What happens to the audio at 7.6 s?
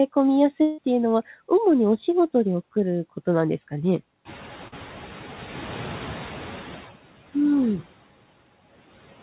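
At 7.6 s the noise suppressor artifacts are audible, as they are across the whole clip. By then the room noise has risen by about 15 dB, from roughly 4.5 s, and sits about 18 dB below the speech. The suppressor lowers the bands it judges to be steady noise by about 12 dB, frame by frame. So the residue dips between words and swells back under them. Above it, nothing passes beyond 4 kHz, as expected on a narrowband call path.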